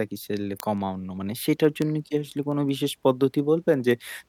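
Word clock ticks run from 0.25 s to 4.26 s through the speech, roughly every fifth of a second, around twenty in all. The receiver was evidently running on its own clock, slightly out of step with the sender's, an error of roughly 150 ppm. Each slip misreads a few samples, likely dropping or repeating one, and is heard as a sharp tick.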